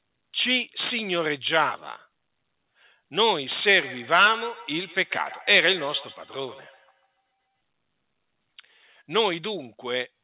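Feedback echo between two devices runs from 3.64 to 7.35 s. One device replays what the other's microphone sent, and that microphone picks it up again, which its echo canceller cannot remove. The sound returns about every 150 ms, peaking about 19 dB below the speech. The band stops at 4 kHz, consistent with narrowband G.711 call audio.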